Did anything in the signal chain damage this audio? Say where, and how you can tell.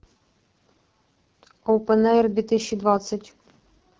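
Yes. AMR wideband (HD Voice) codec damage runs through the whole speech clip, so the fault sits at the codec stage. The speech is band-limited to about 7 kHz and has a rough, raspy grain, which fits AMR-WB at 8.85 kbit/s, the second-lowest mode. At that rate the pulse-excited vocal tract model gets too few bits to follow the voice faithfully, and the top band from 6.4 to 7 kHz is only shaped noise standing in for real detail.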